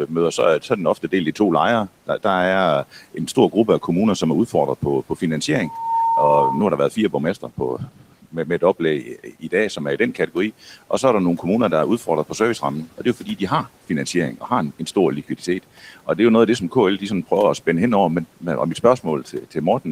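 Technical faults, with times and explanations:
0.07–2.24, 3.14–3.88 (before "som er"), 4.52–5.22 (after "som er"), 6.91–10.35, 12.86–13.4, 14.38–16.08 (between "har finansiering" and "det er jo noget"), 18.37–19.87 s, speech cut by the noise suppressor: brief stretches of speech sound swallowed and faint, dipping by about 8 to 13 dB, because the suppressor mistook speech for noise and turned it down.
5.62–6.78 s, loudspeaker feedback squeal: a 913 Hz tone swells within about a third of a second to roughly 5 dB above the speech, as the microphone re-amplifies its own loudspeaker output.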